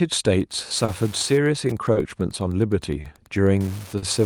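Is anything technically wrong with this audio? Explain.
Yes, there are three kinds of fault in this speech.

Clock drift between sender and receiver runs through the whole clip. The sender's clock is roughly 3 percent slow, so the receiver's jitter buffer keeps draining. It patches the shortfall by repeating or holding short pieces, which causes small, unevenly spaced timing hiccups in the speech.

Wi-Fi interference starts at 0.37 s and continues to the end. A nearby radio's beacon, every 102.4 ms, is rectified by the audio circuitry. The result is a steady ticking nearly ten times a second, about 25 dB below the speech, with rougher rasps during data bursts.

Short stalls from a late packet occur at 0.85–0.90 s, 1.92–1.97 s, 3.01–3.06 s and 3.98–4.04 s. Each time a packet arrived late and the buffer emptied, so the receiver stretched the last sound, by 30 ms in the first three and 40 ms in the last. 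The speech then resumed without losing anything, but each held sound lingers too long with a slight buzz or dip.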